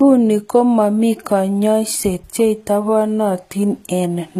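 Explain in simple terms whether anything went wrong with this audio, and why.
Likely HE-AAC compression, throughout the clip: the treble is rebuilt by copying lower sound upward, so s sounds turn gritty and lispy.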